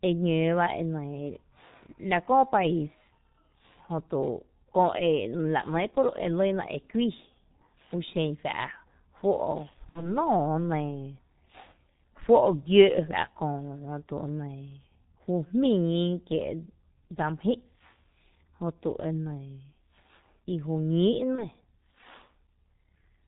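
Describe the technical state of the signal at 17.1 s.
At 17.1 s the G.723.1 codec damage runs throughout. Its coarse 30 ms frames, which fit roughly 6.3 kbit/s, leave muffled, hoarse speech; the spectrogram shows nothing above 4 kHz and smeared consonants.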